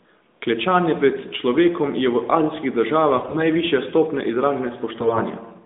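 From 3.16 to 3.46 s and again from 4.94 to 5.21 s, AMR bit errors turn the speech hoarse and gargly. Flipped low-priority bits misplace excitation pulses and skew gain and spectral detail, yet pitch and loudness hold, unlike frame loss, which mutes or repeats.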